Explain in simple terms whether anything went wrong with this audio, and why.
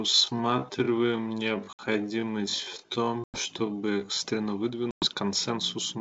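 For the first 4.2 seconds the speech drags, running at a bit over half its natural pace, yet at normal pitch, then suddenly snaps to normal speed. This is a time-stretched section, likely software slowing the audio by repeating tiny slices.

Three hard-edged gaps of silence cut in, at 1.73 to 1.80 s, 3.24 to 3.43 s, and 4.91 to 5.07 s, just before "консенсусную программу". Each is packet loss on an ADPCM call: 60 to 110 ms of data vanished, and the decoder briefly lost track, so the sound returns slightly off.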